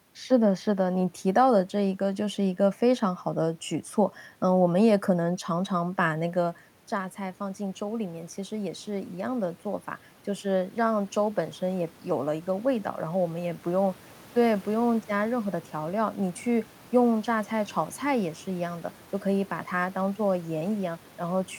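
Automatic gain rising, 5.79 to 13.66 s: the gain control reacted to an input drop of about 10 dB by slowly adding about 6 dB, swelling voice and room noise together.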